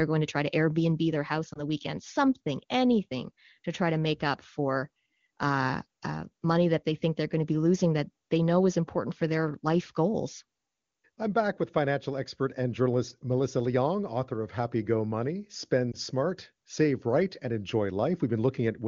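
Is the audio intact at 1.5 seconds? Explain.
No. Between 1.53 and 1.59 s, just after "their house", there is a short dip or warble consistent with a single lost AMR speech frame. A corrupted frame was discarded, and the decoder repeated the previous pitch and vocal-tract settings at reduced gain, producing a brief dip or warble. On the waveform, amplitude briefly sags. A spectrogram shows harmonics frozen and smeared for a moment before "the weekend something anything".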